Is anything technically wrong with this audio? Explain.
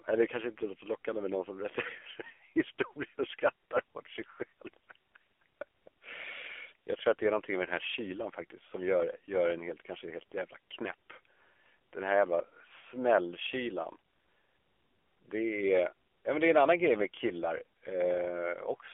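Yes. The whole clip has been through an AMR narrowband mobile codec. The speech is squeezed into a 300 Hz to 3.4 kHz band, so it sounds thin and boxy. Rebuilding the voice from a simple vocal-tract model, at a bitrate that fits around 7.4 kbps, leaves a plainly buzzy, synthetic edge.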